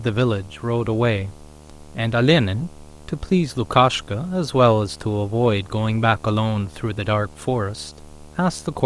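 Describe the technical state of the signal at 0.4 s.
At 0.4 s the speech carries video or display buzz, present across the whole clip rather than starting there. A screen or video cable is coupling its picture refresh into the audio path, giving a buzz at the 75 Hz field rate with hash layered above it, sitting well below the speech. On a spectrogram it shows as a steady line at 75 Hz with evenly spaced harmonics running up the band. The waveform shows a constant low-level ripple beneath the speech.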